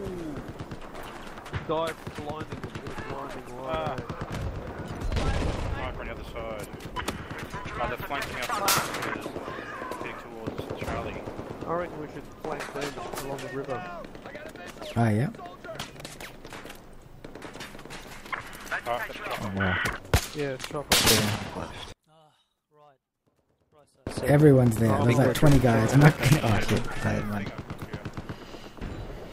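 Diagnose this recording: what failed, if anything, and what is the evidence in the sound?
Analogue wiring failed with loose connector crackle. Irregular bursts of scratchy crackle occur from 14.30 to 14.39 s and again from 25.91 to 26.58 s. A worn contact is making and breaking under movement. That chops the signal.

From 21.92 to 24.07 s the sound collapses by about 35 dB and leaves only a faint remainder. Centre content cancels almost entirely. The likely cause is one channel inverted, so the two channels cancel when summed to mono.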